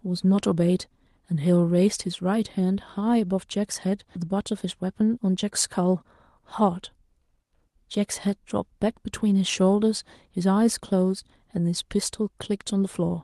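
A speech recording with two timing faults. At 4.15 s there is a skip ahead. Roughly 0.7 s of speech vanishes. The sound either side is joined almost directly, with no silence filling the gap. Buffered audio past the hole simply played on, which fits packets lost in transit or discarded by an overflowing jitter buffer. Just after, from 4.24 to 7.20 s, comes a jitter buffer speed-up. The speech runs at about 106% speed while pitch stays put. It sounds slightly hurried. The receiver was trimming tiny pitch-period slices, around 200 ms in total, to shrink a swollen buffer delay. Through all of this the call path's coding noise is audible, and the top end stops near 12 kHz, which fits Opus at a modest bitrate.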